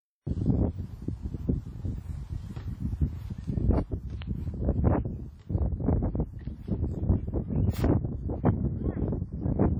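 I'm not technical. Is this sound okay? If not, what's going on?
No. All the way through, the sound is heavily smeared and washy, with a ringing quality and a hiss that swells and fades along with it. That points to WMA compression, likely from squeezing the file down hard, so the encoder blurred detail over time.

At about 4.22 to 4.24 s there is a single loud pop on top of the sound, which carries on underneath. This is likely a brief electrical jolt, from a plug, switch, static or a driver glitch, added to the audio.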